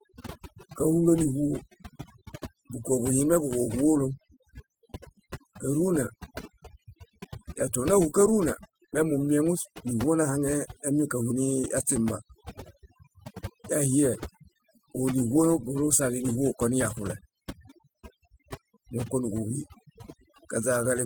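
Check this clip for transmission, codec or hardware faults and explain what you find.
One fault runs through the whole speech clip: overdone noise removal. The noise reduction is set too strong. Bands near its noise estimate are pulled far down, taking quiet speech detail with them. The background drops and breaks up into twinkling specks. The Opus voice compression carries the full band, with content reaching about 20.1 kHz.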